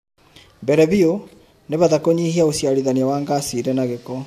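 Nothing technically wrong turns up anywhere in this short bit of speech, so there's no fault to point to here.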